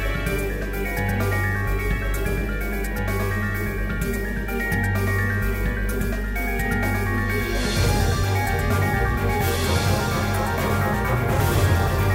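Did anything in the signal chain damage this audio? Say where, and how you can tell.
Yes. A doubled audio track runs throughout. A dry, full-band copy trails about two seconds behind, about 5 dB down. Likely a second capture path.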